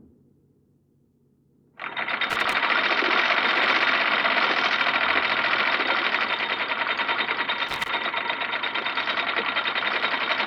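A worn or dirty contact is making and breaking as it shifts, producing loose connector crackle from 2.30 to 2.54 s and again from 7.69 to 7.89 s. Each time the signal is chopped into an irregular, scratchy burst of crackle.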